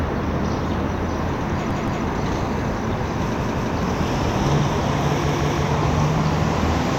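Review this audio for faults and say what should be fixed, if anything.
Three repeated-buffer stutters, at 1.71 to 2.05 s, 3.41 to 3.76 s and 5.29 to 5.63 s. Each time, a chunk of about 171 ms plays twice more with a hard join at every restart, which fits an 8192-sample buffer. New audio didn't reach the device in time, so it replayed what it already had. The audio picks up where it left off, with essentially nothing lost. To prevent it, give the audio thread more headroom or deeper queueing so the device is fed before each buffer runs out.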